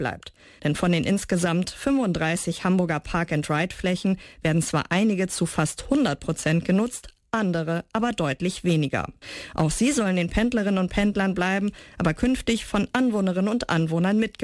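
Nothing stood out as a technical fault when listening to this recording.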